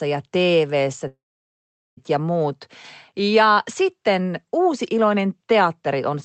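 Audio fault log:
1.07–1.99 s, long network dropout: incoming audio likely stopped arriving for about 0.9 s, so the receiver extended the last sound into a fading buzz, then left about 0.79 s of silence before the sound resumes at "ja muut", with the lost part gone.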